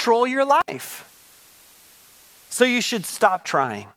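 At 0.61 to 0.69 s there's an intermittent contact: a loose connection opens for about 61 ms, so the speech drops out with crackle either side. From 0.84 s a digital radio blending to analogue kicks in. The receiver cross-fades over 265 ms to the FM feed, and hiss comes up around 30 dB below the speech until 3.47 s.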